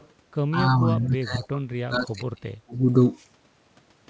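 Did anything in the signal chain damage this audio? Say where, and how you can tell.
Yes. The damage happens in call processing. Faint echo leak appears at 0.00–0.08 s, 1.01–1.13 s and 1.43–1.47 s as a delayed copy of the speech, 216 ms behind the original and roughly 25 to 35 dB quieter. This likely comes from a far-end echo canceller letting loudspeaker pickup through.

From 1.2 to 2.75 s the speech is suppressed in double talk. The level drops by as much as roughly 30 dB. The likely cause is the echo canceller failing to separate talker from echo while both sides spoke, so it turned everything down.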